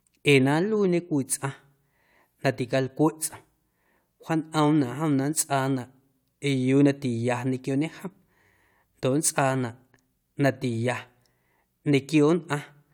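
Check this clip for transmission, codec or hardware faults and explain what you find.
No faults found in this speech recording; nothing to report.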